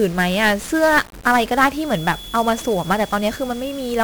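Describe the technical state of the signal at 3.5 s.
At 3.5 s the speech carries heavy 1-bit DFPWM compression throughout. One bit per sample drives the adaptive level, so everything sounds fuzzy and crackly, with treble lost in hiss. The damage points to a rate near 48 kbps.

A feedback whistle is also present, running from 1.76 s to the end. It is a thin, steady 3.4 kHz tone, roughly 20 dB below the speech, swelling and fading slowly in level. It is likely a loudspeaker-to-microphone loop held just at the edge of feedback.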